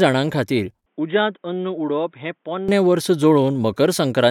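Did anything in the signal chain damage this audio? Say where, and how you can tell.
Yes. From 0.86 s to 2.69 s the speech turns dull and boxy, with nothing above 3.7 kHz, drops roughly 10 dB and gains a faint new background noise, then clears instantly without a gap. That is the input stage: likely an input switched to a poorer device.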